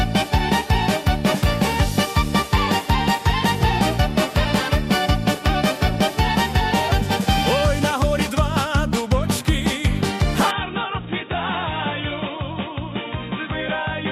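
From 10.51 s to the end, the sound abruptly turns dull and boxy, with nothing above 3.8 kHz, drops by about 5 dB, and gains a faint new noise floor, with no gap at the switch. The likely cause is an input switched to a poorer device.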